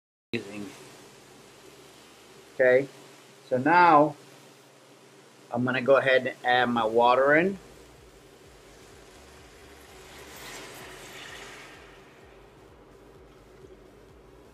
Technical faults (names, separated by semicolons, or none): cut-off start; repeated buffer